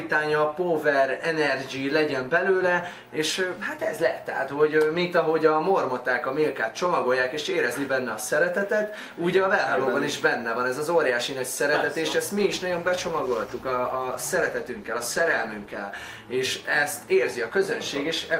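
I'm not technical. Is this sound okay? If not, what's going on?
No. From 12.39 to 16.03 s the sound turns rough and muffled: a call bitrate drop, where the connection weakened and the audio was squeezed into far less data.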